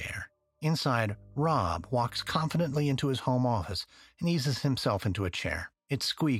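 From 1.10 s to 2.96 s, just before "his home office and", a mains hum sits under the speech: a steady low tone at 50 Hz with some low harmonics, roughly 25 dB below the talker. Power-line current has leaked into the signal path, most plausibly through a ground loop or a nearby transformer. Unlike rumble from handling or wind, it holds one fixed pitch that never wanders.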